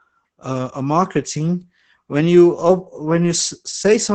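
Muffled, hoarse and faintly robotic from start to finish, the speech in this clip carries Opus voice compression. Nothing reaches above about 9 kHz, so the top of the band is gone. The voice's buzz has a coarse, grainy edge. That points to Opus's SILK linear-prediction mode working in wideband at a low rate. The heavy damage fits a bitrate of around 10 kbps, too little to code the excitation finely.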